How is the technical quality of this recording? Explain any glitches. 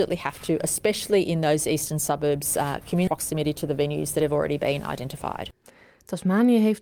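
The recording has two timing faults: a skip ahead and a stretch of jitter buffer speed-up right after it.

At 3.07 to 3.09 s there is a skip ahead. About a second of audio never plays. Either it was lost in transit or the jitter buffer discarded it when it overflowed while newer audio was already queued. Nothing fills the gap, so the sound before and after is spliced almost directly. It is heard as an abrupt jump forward rather than as a silence or dropout.

From 3.17 to 5.62 s the jitter buffer speed-up follows. The buffer was holding more audio than its target, so the receiver repeatedly cut out short segments of one or a few pitch periods, removing roughly 200 ms in total. Playback runs at about 108% of normal speed while the pitch stays the same. The passage sounds hurried until normal pacing returns.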